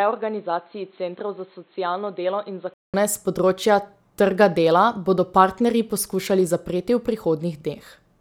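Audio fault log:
0.00–2.94 s, input switched to a poorer device: the recording likely began on a lesser microphone or a headset's call profile before moving to the main input, a device that passes nothing above 4.2 kHz. That missing top end makes the opening speech dull and boxy. It also sits a few decibels quieter, over a faint background hiss of its own, and about 200 ms of silence at 2.94 s marks the switch, after which the sound opens up.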